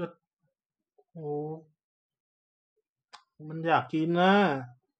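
At 2.21 s the speech just stops dead, and there's a rebuffering stall: the player ran dry of downloaded audio and sat silent until more showed up. At 2.76 s it picks up exactly where it left off, so nothing's missing, but about 0.56 s of dead air gets added.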